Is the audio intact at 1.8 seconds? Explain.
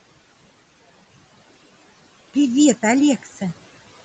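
Yes, at 1.8 seconds the speech is intact, with no dropout, glitch or distortion at that moment.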